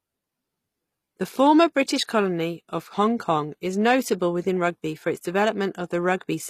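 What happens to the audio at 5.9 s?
At 5.9 s the speech carries HE-AAC compression, present across the whole clip rather than starting there. The codec damage is plainly audible, and nothing sounds above about 14.9 kHz. The likely cause is HE-AAC at a low rate, fitting roughly 24 kbps: only the lower spectrum is coded, and the treble is rebuilt by copying lower bands upward under a coarse envelope. That treble is not the original, so harmonics fail to line up across the crossover.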